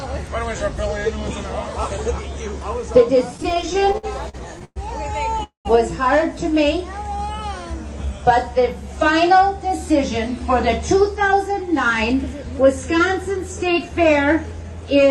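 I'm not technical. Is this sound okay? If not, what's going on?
No. From 3.37 to 4.78 s there are repeated stalls (stutter): fourteen brief hitches, the longest about 0.11 s, where the sound hangs and drags.

At 5.43 s there's a call audio freeze, a single stop of about 0.2 s that fades to silence, likely from delayed network data rather than many small hiccups.

From 6.59 to 7.27 s a jitter buffer slow-down stretches the sound to 95% speed, drawn out but at the same pitch.

From 10.94 s to the end, a jitter buffer speed-up does the opposite, running 104% fast and trimming roughly 0.15 s.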